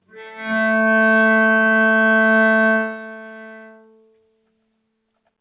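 Across the whole clip the level pumps and flutters, swinging by roughly 20 dB as steady parts and tails sink while sharp onsets push through. This is a noise suppressor applied to music or sounds: a speech-tuned suppressor treats sustained tones and ambience as noise and keeps pulling them down.

From 0.02 to 0.46 s, and again for about 2 s between 2.81 and 4.65 s, the sound dips hard, up to about 19 dB, with decays clipped short. This is sound cut by the noise suppressor, which judged these held or fading stretches to be noise and attenuated them more than the rest. Everything is also band-limited with nothing above 4 kHz, consistent with a G.711 call path.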